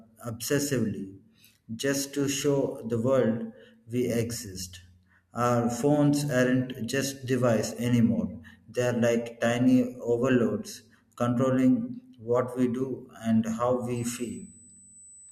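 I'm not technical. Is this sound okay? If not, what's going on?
No. USB whine runs from 13.96 s to the end of the clip: a steady, faint high-pitched tone at 8 kHz. A USB connection draws power in rapid bursts, and that electrical rhythm leaks into the audio as this fixed-pitch whistle.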